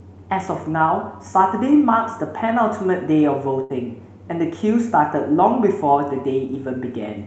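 A speech recording carried over a call link with an audio band reaching about 8 kHz has one brief disruption at 3.63 to 3.72 s, where the last sound is held and dims and then jumps ahead. It's a burst of packet loss: audio packets failed to arrive in time, so the receiver stretched the last sound for about 63 ms while fading it, and roughly 60 ms of the original speech never plays.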